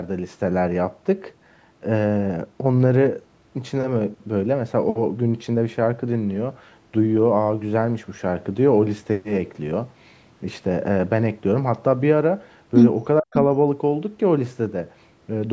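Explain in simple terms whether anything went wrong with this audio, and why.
At 13.2 to 13.34 s the speech nearly vanishes for about a sixth of a second, likely speech suppressed in double talk, where the echo canceller turned down both its own talker and the loudspeaker echo while both sides spoke at once.

From 13.34 to 13.39 s a somewhat quieter, brief copy of the speech returns 0.47 s late. This is likely an echo leak, where the loudspeaker's sound slipped past the echo canceller.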